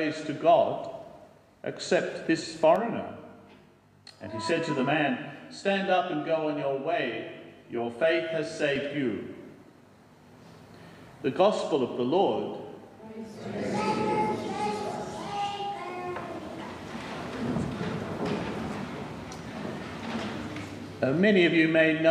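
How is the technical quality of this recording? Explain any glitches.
The recording has one clear glitch, a channel delay (comb filtering) from 2.76 s to 8.76 s. One channel lags the other by around 20 ms, and when the two are folded to mono, the shared content cancels at evenly spaced frequencies, with the first notch somewhere near 30 Hz. The sound turns rough and slightly doubled for those six seconds. Unlike flanging, the notches stay put rather than sweeping, so the coloration is static and simply switches on and off.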